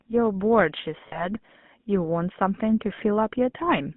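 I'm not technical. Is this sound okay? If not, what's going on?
No, not quite. It's speech that has gone through a GSM full-rate codec, the old mobile phone coding. Instead of storing the sound itself, it stores a rough model of how the voice is shaped and rebuilds it from a simplified pulse pattern. The whole clip comes out buzzy and a bit gravelly, and it's clearly audible. The sound is also squeezed into a narrow phone band, roughly 150 Hz to 3.5 kHz, so it's thin and lacks crispness.

There are also two spots with lost GSM frames, where small pieces of the signal never arrived. The decoder fills each gap by reusing the last good piece, so the sound briefly hangs with a rough, metallic ring. The first is from 1.08 to 1.28 s and sounds like a couple of frames went missing. The second, from 2.96 to 3.00 s, is shorter and sounds like a single frame.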